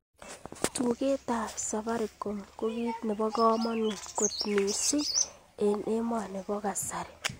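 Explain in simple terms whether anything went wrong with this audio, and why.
Nothing went wrong; no technical faults can be heard here.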